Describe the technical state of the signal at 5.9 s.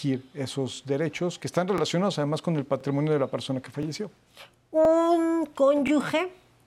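At 5.87 to 5.90 s the speech has an overlapping-chunks fault. The audio was handled in 1.0 s chunks, and the next chunk starts about 23 ms before the previous one finished, so that short stretch of speech plays twice at the join. It sounds like a brief stutter or click. A dropout or gap would lose audio and leave a hole; here nothing is missing, and the same material is heard again.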